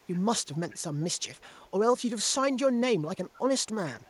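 From 0.0 to 0.2 s, 0.54 to 0.8 s, 1.38 to 1.52 s and 3.33 to 3.38 s, echo leak brings back a faint copy of the speech 430 ms late, likely from an echo canceller missing loudspeaker pickup. It is a distinct repeat, not room reverb's smeared tail.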